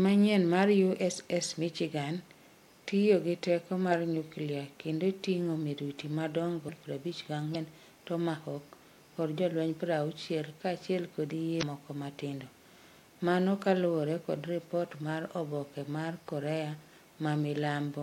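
Speech with three bursts of damaged data in a compressed stream, at 6.65–6.69 s after "nyuklia kendo tingo miruti", 7.51–7.55 s, and 11.59–11.63 s after "kachiel kod". Each is a brief glitch as the decoder loses frame sync, showing as a short disturbance on a spectrogram.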